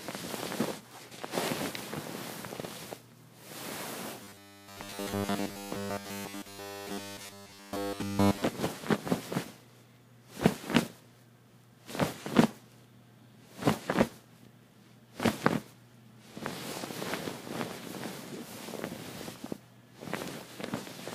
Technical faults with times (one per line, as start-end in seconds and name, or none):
4.23-8.42 robotic sound from repeated short buffers